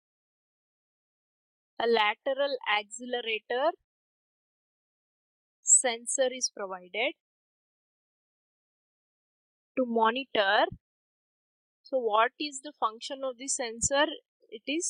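No technical faults can be heard anywhere in the audio, so there is nothing to describe in time order.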